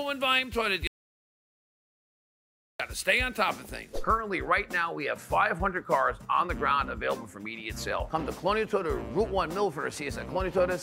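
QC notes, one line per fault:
0.87–2.80 s, audio dropout to silence: the sound cuts off abruptly and returns mid-flow after about 1.92 s. The gap is silence, with no room tone. The input was likely lost while the recorder kept writing silence, so that stretch is gone.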